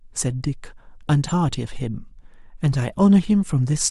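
A speech recording with compressed frames skipped between 1.28 and 1.32 s. At that point the audio jumps forward, losing about a tenth of a second of material, which points to whole codec frames that were either absent from the stream or rejected by the decoder as corrupt. The splice is heard as an abrupt advance in the speech.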